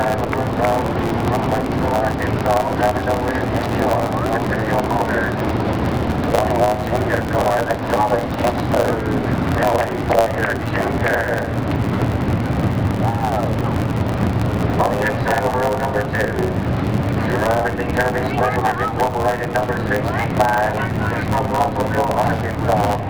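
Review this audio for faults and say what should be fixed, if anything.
A block size mismatch (truncated) runs through the whole clip. A steady buzz at 109 Hz marks the block rate, and the audio plays back about 1.09 times fast at roughly normal pitch. The upstream stage writes blocks about 9% longer than the next stage reads, so each block's tail is discarded. To prevent it, make both stages negotiate and use the same block size, or buffer the surplus samples instead of dropping them.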